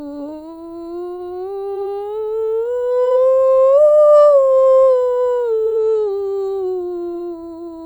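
Music, with three short frames-out-of-order faults at 1.75–1.82 s, 3.05–3.12 s and 5.65–5.72 s. In each, two adjacent blocks of coded audio were decoded in swapped order, so a roughly 70 ms stretch plays its halves reversed. The result is a brief garbled flutter. The swapped block length, about 46.4 ms, points to single frames exchanged. No time is lost and the tempo stays intact.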